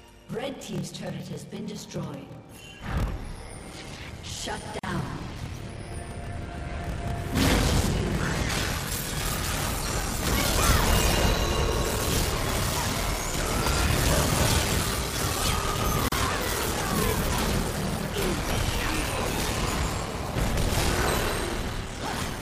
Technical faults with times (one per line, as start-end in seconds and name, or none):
0.00-22.41 block size mismatch (padded)
4.79-4.83 gap at a join of encoded pieces
16.08-16.12 gap at a join of encoded pieces